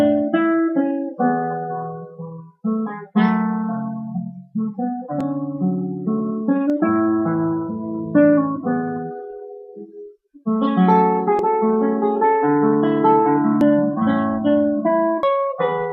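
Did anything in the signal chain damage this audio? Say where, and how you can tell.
Yes: dropped buffers (overruns) at 5.21, 6.70, 11.39, 13.61 and 15.23 s, each a point where the sound jumps ahead with no gap, skipping roughly 40 ms, or 100 ms at 6.70 and 15.23 s. Likely the capture buffer stage overwrote samples before the driver collected them.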